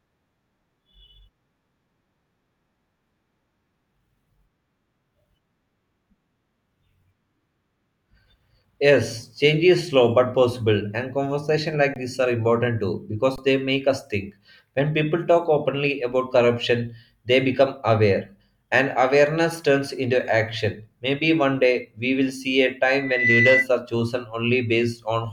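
At 11.94–11.96 s and again at 13.36–13.38 s the speech freezes on a flat, held level for 20 ms: an underrun with held sample, where the output buffer emptied and the converter kept its last value. About 20 ms of live audio is skipped each time.

From 22.94 to 23.67 s a loudspeaker feedback squeal appears, a single 2 kHz tone that swells over roughly 0.3 s to about 5 dB above the speech. A microphone was picking up its own loudspeaker, and the loop gain passed one at that frequency. The swelling build-up separates it from a steady interfering whistle.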